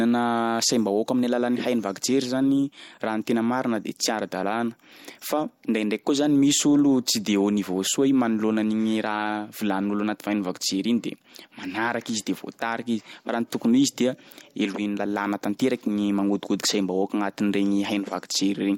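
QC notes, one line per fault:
Throughout, periodic clock jitter: a rough, metallic edge on the speech, harshest on bright sounds and gone in pauses, from converter clock wobble near 100 Hz adding sidebands.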